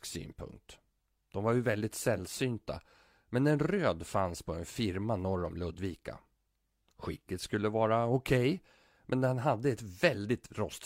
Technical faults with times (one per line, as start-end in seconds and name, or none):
none